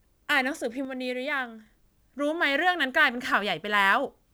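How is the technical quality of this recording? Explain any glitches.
The recording has one clear glitch. From 0.85 to 1.66 s the speech drops abruptly by about 6 dB and then returns. The likely cause is one channel dropping out, halving the mono sum. The instant step and exact halving set it apart from a fade or gain ride.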